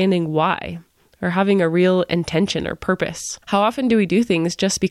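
No technical faults are audible anywhere in the speech recording.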